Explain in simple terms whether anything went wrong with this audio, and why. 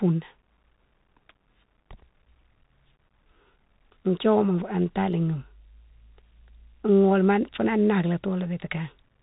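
The whole clip has been squeezed through a Bluetooth CVSD headset codec, so the speech sounds muffled above about 4 kHz, with scratchy s sounds and a grainy hiss underneath.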